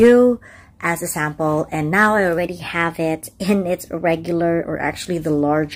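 Wrong sample rate from 2.38 to 4.64 s: the audio plays 1.09 times fast and 1.47 semitones sharp, which fits 44.1 kHz material played back at 48 kHz.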